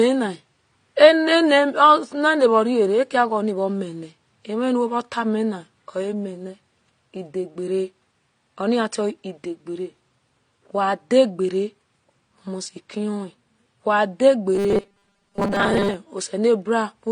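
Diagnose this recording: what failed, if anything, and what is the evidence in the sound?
Throughout the speech, the top of the band is cut off, and two different kinds of codec smearing are heard together. At the codec stage, this is likely transcoding between lossy codecs, consistent with HE-AAC followed by AAC-LC at a lower rate. On a spectrogram it shows as a hard ceiling with blurred, patchy high bands beneath it.

From 14.55 to 15.94 s the speech becomes a rigid metallic buzz at 200 Hz. This is robotic sound from repeated short buffers, likely arising in the driver or buffer stage. It fits a 5 ms block being replayed over most of that span while new audio is skipped. A waveform would show identical 5 ms cycles, and a spectrogram would show a fixed 200 Hz harmonic comb.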